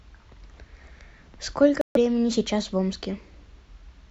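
At 1.81 s the speech cuts to silence until 1.97 s, then resumes further along as if it had kept playing, with about 140 ms of sound missing. A Bluetooth dropout is the likely cause. The waveform shows a flat gap, and the spectrogram a blank vertical band with sharp edges.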